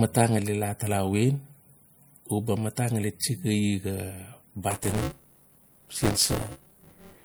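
A speech clip with plainly audible codec damage all the way through: a watery, swirly quality and smeared consonant attacks. That's likely MP3 compression, and the degree of damage fits a bitrate around 64 kbps. From 4.70 s to the end there's buffer tearing, a steady robotic buzz at 200 Hz that rides only on the speech. The writer and reader of the ring buffer have drifted into each other, so roughly a third of every 5 ms period replays audio from about 20 ms earlier, with hard joins on both sides.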